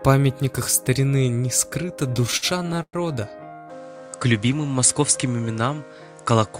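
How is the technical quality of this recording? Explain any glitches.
The recording has two clear faults: a stuttering passage in the first half and a drop in bandwidth for the remainder.

Repeated stalls (stutter), 2.07 to 3.40 s: packets arrived late, so the jitter buffer kept running dry. The receiver stretched the last sound across more than a dozen short gaps, the longest 103 ms, about 21% of that span. Nothing is lost, but the audio drags and hiccups.

Input switched to a poorer device, from 3.70 s to the end: the sound abruptly narrows, and a faint new noise floor appears. There is no silence at the change and the level stays about the same. A likely cause is the system switching to a lower-grade microphone mid-recording.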